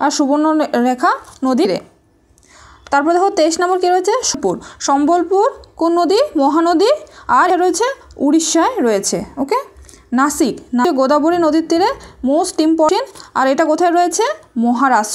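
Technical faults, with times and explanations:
1.65, 4.34, 7.50, 10.85 and 12.89 s: damaged data in a compressed stream; corrupted frames make the decoder lose sync, giving brief blips seen as thin broadband vertical streaks.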